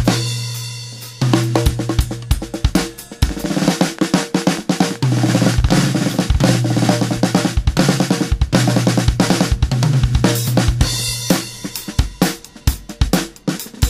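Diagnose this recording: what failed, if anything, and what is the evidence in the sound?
A train of clicks runs from 3.29 to 5.70 s: some thirty similar pulses at about 11.7 per second, irregularly spaced and well above the surrounding level. The likely cause is electrical interference coupling into the analogue wiring, or a faulty connection or power supply injecting pulses.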